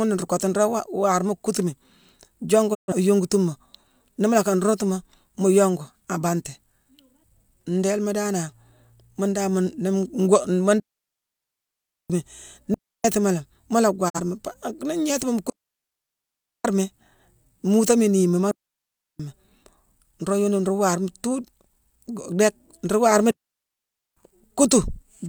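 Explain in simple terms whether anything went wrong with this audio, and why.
Two things went wrong. First, a digital broadcast dropout: the receiver stopped getting good data and briefly muted, fading out over about 20 ms. The speech drops out for roughly 0.13 s at 2.73 s and about 0.04 s at 14.08 s, and that part of the speech is lost.

Second, a digital wireless dropout: the wireless link lost too much data, so the receiver shut the sound off until the link recovered. You hear clean silent gaps with no crackle, at 10.80 to 12.10 s, 12.74 to 13.04 s, 15.50 to 16.65 s, 18.51 to 19.20 s and 23.31 to 24.17 s.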